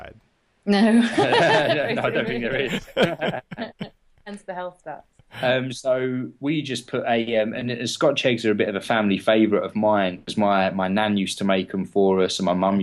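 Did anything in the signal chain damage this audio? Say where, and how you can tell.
No, nothing in the chain, from capture through to playback, left any audible mark on this audio.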